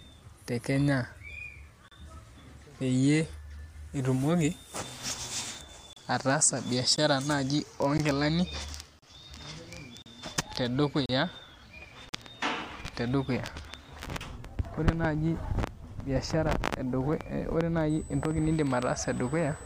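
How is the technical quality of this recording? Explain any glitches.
The recording has two distinct technical problems: a run of short dropouts in the first two-thirds and a high whine near the end.

The gaps between stream segments come from segment timestamps that don't quite meet, leaving holes the player fills with silence. Hard-edged cuts of roughly 14 to 40 ms interrupt the speech at 1.88–1.92, 5.93–5.97, 6.96, 7.98, 8.99–9.02, 10.02–10.06, 11.06–11.09 and 12.09–12.13 s. From 5.93 s they recur about once per second, matching 1-second segments. No audio goes missing; the silence is inserted.

USB whine appears from 17.9 s to the end. Current drawn by the USB bus in 125-microsecond microframes leaks into the audio through the power or ground path. It is heard as a steady, fixed-pitch tone at 8 kHz, sitting about 20 dB below the speech, thin and piercing above the sound rather than blending into it.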